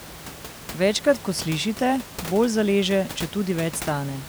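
No technical faults occur at any point in the speech, with only the room's own background noise sitting about 15 dB below it.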